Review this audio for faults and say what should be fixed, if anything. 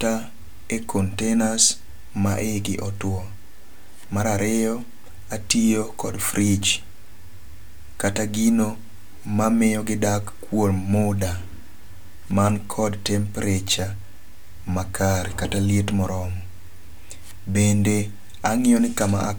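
Nothing here needs fixing, as I didn't hear any faults anywhere in the recording.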